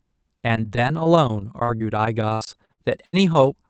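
Repeated packet loss (robotic sound) runs from 1.63 to 3.49 s. Over this stretch, six gaps open as packets go missing, the longest about 80 ms and roughly 320 ms in total, covering about 18% of the span. Each hole is bridged by extending the preceding sound, so around half a second is rebuilt in all. The speech turns choppy, with pieces dropping out, through a call path whose 8 kHz bandwidth fits Opus.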